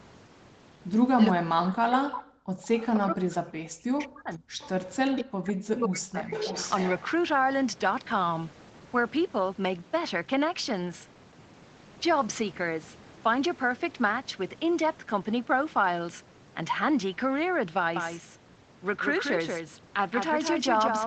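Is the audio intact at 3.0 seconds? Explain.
No. From 2.95 to 4.56 s the speech dips sharply, losing around 40 dB in places, likely speech suppressed in double talk by the echo canceller.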